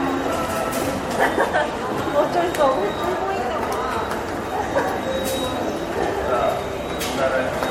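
Throughout, generation loss gives hollow, swirly smearing and blurred attacks, more than one MP3 pass at around 64 kbit/s would leave. It likely comes from about five re-encodes, with nothing above 16.5 kHz.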